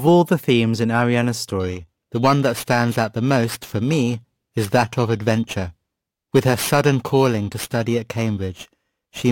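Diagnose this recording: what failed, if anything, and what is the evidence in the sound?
Converter clock trouble: periodic clock jitter from 1.6 s to the end adds a rough, metallic edge, sidebands spaced around 3 kHz around everything, worst on the highs.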